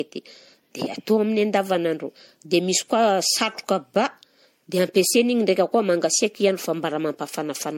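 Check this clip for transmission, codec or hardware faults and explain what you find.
One codec fault runs through the whole speech recording.

Generation loss, throughout: the audio was likely decoded and re-encoded as MP3 around five times, which fits a 64 kbit/s chain. Each pass re-quantised it on a shifted frame grid, so the speech sounds swirly, smeared and hollow, with blurred attacks and nothing above 16.6 kHz.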